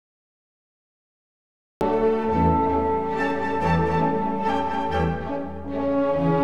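Cut-off start at 1.81 s: the audio is digital silence until then and enters mid-sound with no attack or fade, because capture began late. Doubled audio track from 3.30 to 4.94 s: a second full-band copy runs around 300 ms behind, roughly 5 dB quieter and without room colour. It starts and stops abruptly, likely from a slower second capture path mixing in the same sound.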